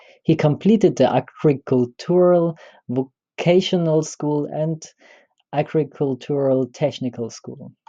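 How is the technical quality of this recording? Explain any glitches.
Nothing in the speech recording registers as a technical fault, so there are no glitches to explain.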